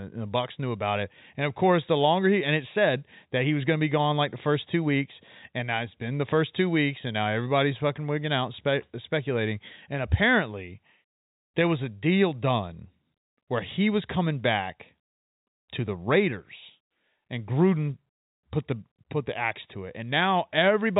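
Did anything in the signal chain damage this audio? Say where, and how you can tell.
No, nothing in the signal chain damaged this speech.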